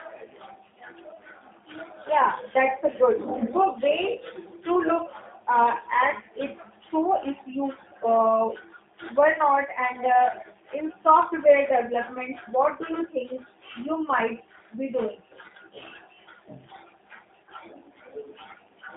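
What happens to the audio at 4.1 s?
At 4.1 s the speech carries G.729 codec damage, present across the whole clip. Each 10 ms frame is rebuilt from a vocal tract filter, a pitch predictor and a few pulses, consistent with an 8 kbit/s stream. Content stays within roughly 150 Hz to 3.7 kHz, with nothing above 3.8 kHz. Unlike a plain telephone band filter, it adds a rough, synthetic buzz.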